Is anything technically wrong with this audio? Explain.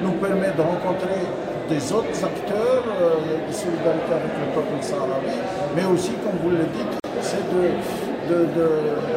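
Yes, there's a gap at a join of encoded pieces from 7.00 to 7.04 s: a 44 ms hole in otherwise continuous sound. The pieces were encoded separately and joined untrimmed, so encoder delay and end padding survive. Edges are smeared by the codec, and the sound resumes where it stopped.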